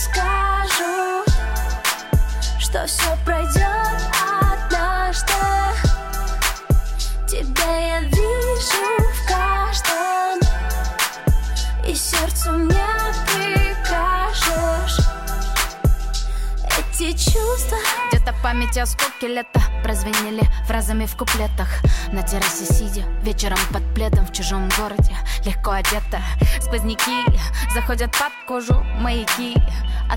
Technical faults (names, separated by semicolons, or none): none